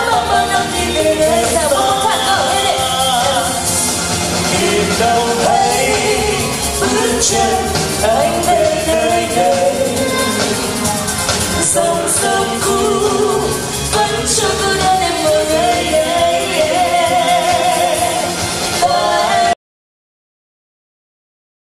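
At 19.53 s the audio drops out to silence and stays dead right to the end, a little over 2 s of pure silence with no room tone at all. The input likely got disconnected or muted while recording carried on, so whatever followed is simply gone.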